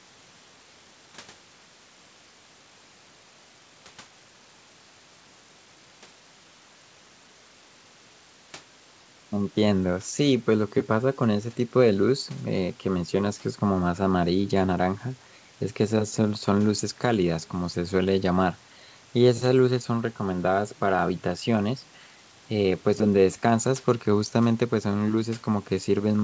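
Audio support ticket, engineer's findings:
Nothing to flag on this speech clip: it sounds like normal call-path audio through mic processing and a wideband codec, with the top end stopping around 8 kHz as expected for that kind of link.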